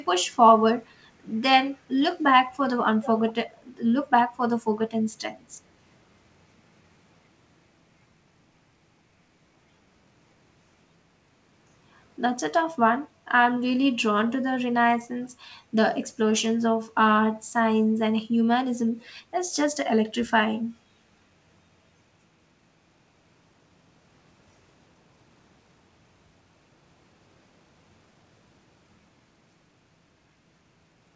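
Speech carried over a call path whose content stops at 8 kHz, which fits a wideband codec such as G.722, has a brief echo leak from 3.02 to 3.08 s. A faint repeat of the voice arrives 423 ms late, roughly 15 dB below the speech, likely residual loudspeaker pickup that the far end's echo canceller failed to remove. On a spectrogram it shows as a weak, short ghost of earlier speech patterns. In the waveform it appears as a low-amplitude burst.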